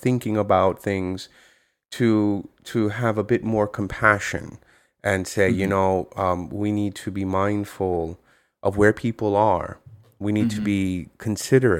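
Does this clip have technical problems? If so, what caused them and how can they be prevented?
No, nothing technical goes wrong anywhere in this speech recording, so there's nothing here that needs preventing.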